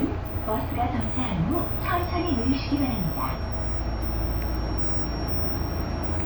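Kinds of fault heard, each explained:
Feedback whistle, from 1.94 s to the end: a thin, steady 5.6 kHz tone sits roughly 20 dB below the sound, swelling and fading slowly in level, likely from a loudspeaker-to-microphone loop held just at the edge of feedback without building up.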